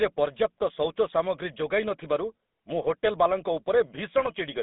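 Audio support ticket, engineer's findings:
Buzzy, gravelly roughness across the whole speech clip, plainly audible. Probable component: GSM full-rate codec, consistent with 13 kbps. Vocal-tract model driven by a sparse pulse excitation smears the speech into a rasp. Band limited to roughly 200 Hz to 3.6 kHz.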